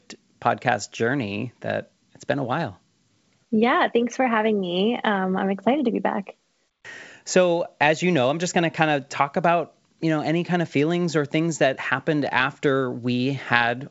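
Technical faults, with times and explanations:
Nothing here counts as a fault; the speech comes through G.722 wideband telephone coding at 64 kbit/s, with the top of the band stopping around 7.7 kHz as that coding does.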